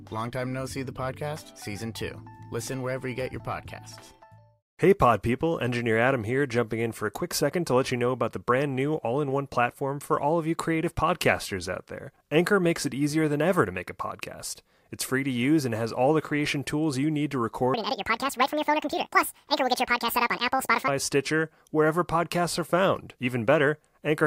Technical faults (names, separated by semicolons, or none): section at the wrong speed